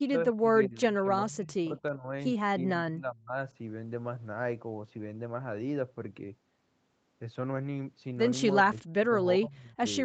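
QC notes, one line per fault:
0.00–2.11 s, 2.64–3.36 s, 8.63–9.18 s and 9.37–9.85 s: speech suppressed in double talk. The speech dips and breaks up in patches. It's shallowest at the start, around 25 dB down, and worst in the later stretches, where it sinks by about 30 to 40 dB. The likely cause is an echo canceller that heard both sides talking at once, couldn't separate this talker from the loudspeaker echo, and turned both down.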